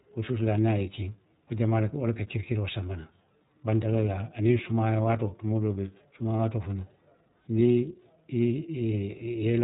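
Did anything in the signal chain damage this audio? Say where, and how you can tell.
Yes, at the codec stage. The iLBC codec runs throughout. Nothing passes above 3.8 kHz, and the speech sounds rough and synthetic, which fits 30 ms frames at 13.33 kbps.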